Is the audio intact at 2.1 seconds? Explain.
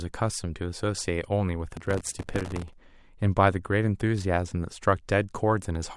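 No. From 1.77 to 2.73 s, processor overload crackle tears through the speech: many buffers of roughly 1.5 ms miss their deadlines and replay old audio, giving gritty crackle.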